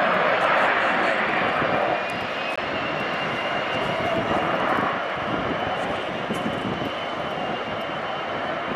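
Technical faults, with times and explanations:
2.56 s, CD skip: a tick and a very brief mute of about 20 ms, then playback resumes from a different turn of the disc's spiral after the laser jumped tracks. The displaced continuation, not just a gap, sets it apart from a simple dropout.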